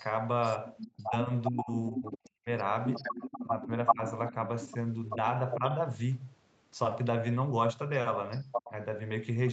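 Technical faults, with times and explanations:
0.82–1.05, 1.58–2.29, 2.95–5.74 and 8.3–8.71 s, echo leak: a delayed copy of the sound returns about 0.4 s later (407 ms early, 387 ms later), likely from a far-end loudspeaker the echo canceller missed. It is faint at first (about 35 dB down), then nearly as loud as the direct sound (about 5 dB down, level at 8.3 s). Unlike room reverberation, it is a distinct, separate repeat.
0.97–2.49, 3.44–4.35 and 5.15–5.62 s, speech suppressed in double talk: the speech dips (about 35 dB at first, then about 10 and 5 dB) while the echo overlaps it. This is likely from the canceller attenuating both signals. Unlike a dropout, the speech is turned down during double talk rather than lost in transmission.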